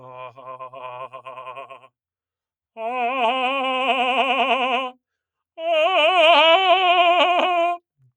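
A noise suppressor built for speech has been applied to this music and runs for the whole clip. It treats sustained parts as noise. Held notes and decaying tails keep being pulled down, while attacks pass through. The level swings by around 5 dB. The result is pumping, with the music thinning and recovering in turn.

At 1.12 s the sound is cut by the noise suppressor. It drops by about 15 dB for roughly a sixth of a second, until 1.27 s. At 1.61 s it happens again, lasting until 1.9 s, close to a third of a second, with the same drop of about 15 dB. Both times the suppressor took the sustained music for noise and clamped it. The music sinks in level before coming back.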